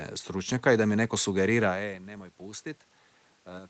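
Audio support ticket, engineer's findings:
Nothing wrong found here: the top end stops around 8 kHz as the call path normally does, there's room noise in the background, and the level shift near 1.5 s is just the talker moving relative to the mic.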